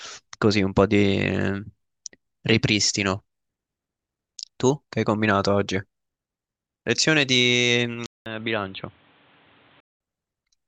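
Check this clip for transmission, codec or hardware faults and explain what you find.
One fault is present: an input switched to a poorer device, from 8.06 to 10.00 s. After a 200 ms gap the speech turns dull and boxy, with nothing above 4.2 kHz, a few dB quieter and over a new faint noise floor, likely from the recording input changing to a narrower-band microphone.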